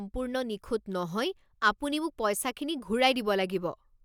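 No technical faults are audible anywhere in the recording.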